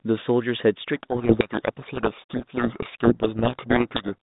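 From 0.96 s to 4.14 s the speech is buried in harsh distortion: a codec payload misread, where the G.726 code words are unpacked with their bit order reversed, so the 32 kbit/s ADPCM decoder rebuilds wrong difference values and harsh distortion buries the speech.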